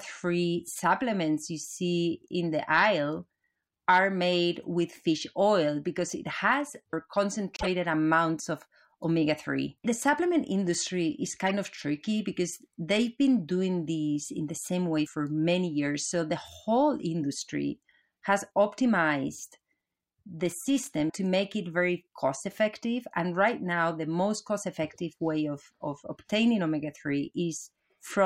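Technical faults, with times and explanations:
7.56–7.67 s and 11.46–11.52 s, corrupt frame decoded: the decoder played a few bit-damaged frames, misplacing energy in frequency, which gives short chirpy bursts before "amounts of omega" and after "supplement industry is".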